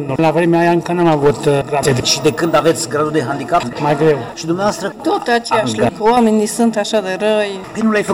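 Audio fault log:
throughout: hard clipping. The signal is driven about 9 dB past what the stage can carry, so every peak is sliced off flat, and roughly 2 percent of samples sit pinned at the limit. On loud passages this comes through as a harsh, gritty fuzz. On the waveform the tops and bottoms look squared-off like plateaus. A spectrogram shows vertical smears of added harmonics reaching high up, lined up with each loud moment.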